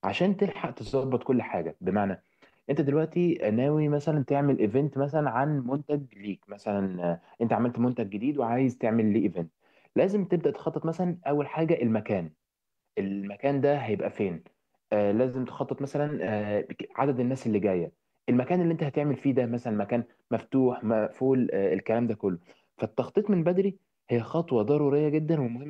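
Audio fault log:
No faults were found in the speech. Nothing in the audio calls for a timed entry.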